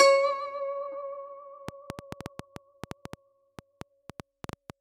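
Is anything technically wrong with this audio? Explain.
Yes. From 1.69 s to 4.71 s the music carries a train of clicks. Something outside the audio itself is likely injecting short pulses into the signal path, such as interference from nearby equipment or an interface that keeps faltering, at about 6.3 per second but at an uneven spacing. The result is around twenty similar ticks or pops, roughly 10 dB above the music, that sit on top of the sound through this stretch, including its quieter moments.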